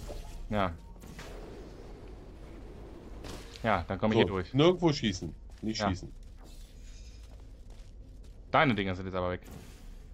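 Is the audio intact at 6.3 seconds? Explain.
No, not quite. At 6.30 s some compressed frames get skipped, and the audio jumps ahead by roughly a tenth of a second. Those frames were missing or the decoder rejected them. At the join you hear the audio lurch forward abruptly.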